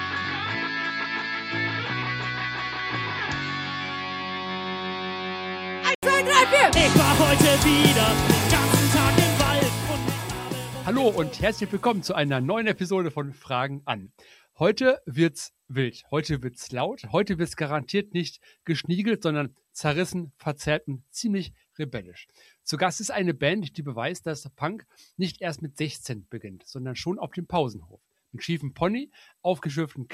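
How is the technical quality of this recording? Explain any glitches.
The recording has one fault, at the very start. From 0 to 6.03 s the sound is dull and boxy, with nothing above 7.6 kHz, about 5 dB quieter, and carrying a separate noise floor around 45 dB below the signal. An 80 ms silence follows, then full-band sound returns. The likely cause is an input switched to a poorer device, such as a narrower-band microphone or a headset's call profile, with the system changing over to the better input at that gap.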